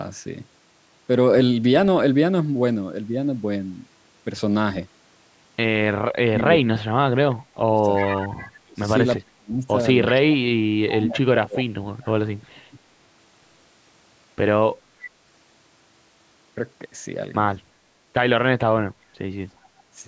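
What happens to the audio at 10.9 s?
The sound dips sharply, by as much as about 35 dB, and partly cuts out between 10.09 and 12.1 s, losing about a second and a half in total. This is likely speech suppressed in double talk: with both sides talking, the echo canceller turned everything down. Inside that stretch, from 10.88 to 11.06 s, a faint delayed copy of the voice comes through about 0.36 s late and about 15 dB down. It is likely an echo leak, loudspeaker sound the canceller on the loudspeaker side failed to remove.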